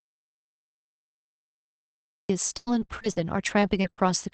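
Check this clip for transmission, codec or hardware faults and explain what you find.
Two transmission faults are present. The speech sits on an Opus-style call path whose spectrogram tops out near 8 kHz.

The first fault is an audio dropout to silence. It runs from the very start to about 2.30 s, already in progress when the clip begins. The input was most likely lost upstream while the encoder kept writing silence. On the waveform this is a flat line. On the spectrogram it is pure black, with no room tone, until the speech abruptly resumes.

The second fault is repeated packet loss, which gives a robotic sound from 2.57 to 4.16 s. Nine gaps occur, the longest about 93 ms, and about 360 ms of audio goes missing. Concealment stretches the previous sound across roughly a fifth of that span, which sounds choppy. The spectrogram shows smeared, repeated frames between brief dropouts.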